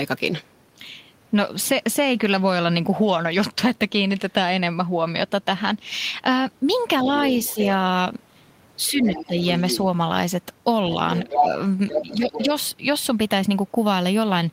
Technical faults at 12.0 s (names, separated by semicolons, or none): other side's voice leaking through; speech suppressed in double talk